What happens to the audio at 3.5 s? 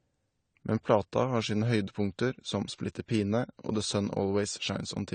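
At 3.5 s the speech carries the same damage heard across the whole clip, which sounds like AAC compression, likely AAC-LC at a low bitrate, something in the region of 32 kbps. The encoder has discarded everything above 9 kHz, so the top end is missing and the sound is dull. Too few bits go to the remaining frequency lines, leaving gaps in the spectrum that smear transients and give sibilants a warbling, fizzy edge.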